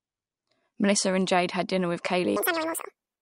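From 2.36 s, right after "had dinner with", to the end, a wrong sample rate fault plays the speech twice as fast and an octave (12 semitones) higher, which fits 22 kHz audio played at 44.1 kHz. Unlike a pitch shift or time-stretch, speed and pitch change together.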